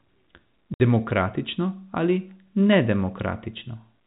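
Clock slip clicks run from 0.1 to 4.04 s, a soft rattle of ticks roughly every 40 ms, likely from two unsynchronised clocks about 500 ppm apart dropping or repeating single samples. Packet loss filled with silence cuts a hard-edged 60 ms hole from 0.74 to 0.80 s, which fits three lost 20 ms packets replaced by silence.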